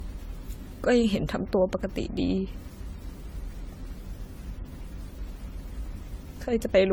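From start to finish the speech has a swirly, hollow quality, with smeared consonant attacks and a watery shimmer in the upper range that is worse than a single lossy encode would leave. This is generation loss, likely from the audio passing through AAC-LC around seven times, each time on a shifted frame grid, so quantisation noise and spectral holes stacked up. The degradation points to a chain running at about 64 kbit/s.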